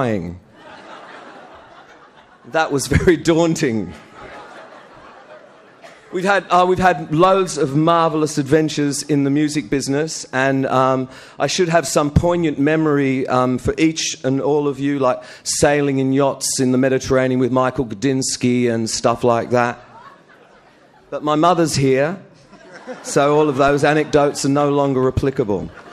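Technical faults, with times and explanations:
23.68 s, DC step. The waveform's zero line jumps suddenly by about -15 dBFS. That abrupt shift registers as a single low thump. The offset then fades away, as a 20 Hz high-pass drains it back toward zero. The sound itself continues unchanged.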